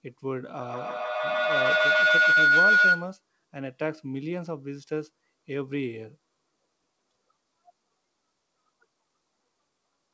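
From 0.6 to 3.23 s, feedback howl: the loop gains each pass, swelling to a tone around 1.5 kHz, about 11 dB above speech, a bright spectrogram line.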